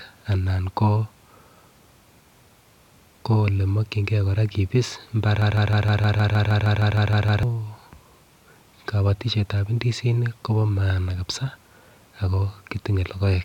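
A speech recording with a broken-record loop from 5.42 s to 7.43 s. A fragment about 156 ms long plays back to back 13 times, filling roughly two seconds with an identical stutter, and the speech that belonged in that window never arrives. The exact repetition of one short piece points to a stall, most likely in the player, encoder or stream, that kept re-sending the last buffered fragment until the flow recovered.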